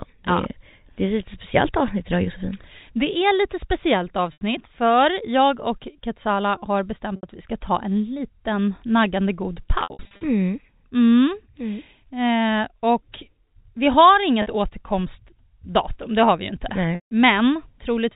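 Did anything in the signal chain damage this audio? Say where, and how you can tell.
Yes, at the network stage: packet loss with pitch repetition at 4.33–4.41 s, 7.16–7.23 s, 9.81–10.21 s (scattered), 14.42–14.46 s and 16.95–17.11 s. The receiver loops the last pitch period across each gap, giving a brief buzzy hold; the 160 ms gap fades toward silence.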